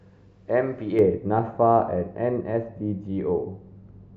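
From 0.99 s to the end, the speech turns dull and muffled, a sign of de-emphasis applied wrongly: a treble cut meant to reverse pre-emphasis has hit audio that never had it, or was applied twice. At 10 kHz the level sits about 11 dB below 1 kHz, falling gradually rather than at a fixed cutoff. That gentle, continuous slope sets it apart from a low-pass filter, which keeps the treble intact up to a sharp edge and then removes it.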